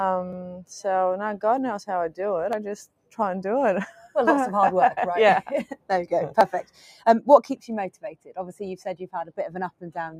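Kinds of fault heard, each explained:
Noise suppressor applied to music or sounds: A speech-oriented noise suppressor is running on this audio. It treats sustained and fading material as noise. Level swings by around 10 dB throughout, so held sounds and tails sink and the sound pumps and thins.
Sound cut by the noise suppressor: The suppressor pulls certain passages well below the rest. Dips come at 0.49–0.7, 2.86–3.19, 3.95–4.15, 5.7–5.9, 6.63–7.06 and 7.91–8.35 s, reaching about 13 to 18 dB down. Sustained parts and decays are clipped short there.
Dropped buffer (overrun): Sudden jumps forward are heard at 0.33, 1.58, 2.53 and 6.41 s. A short stretch is missing at each, with no gap of silence. The last skip is longer. The likely cause is buffers overwritten before being read.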